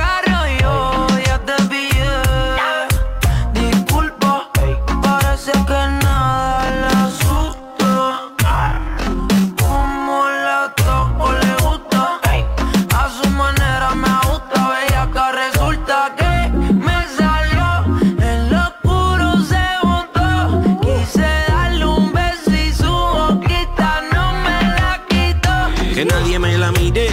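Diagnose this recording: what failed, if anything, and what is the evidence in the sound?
Likely software time-stretching slowed 5.66 to 11.10 s to 0.553 speed. This time-stretched section repeats short pieces, dragging while the pitch holds.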